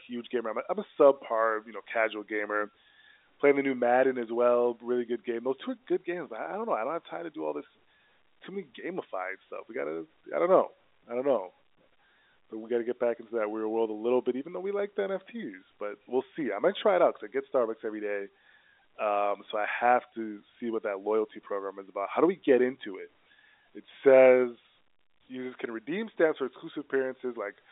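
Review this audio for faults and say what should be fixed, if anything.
Nothing here needs fixing. The speech comes over a G.711 telephone line, so the sound sits between about 300 Hz and 3.7 kHz with nothing above 3.8 kHz, which is simply how that path carries audio.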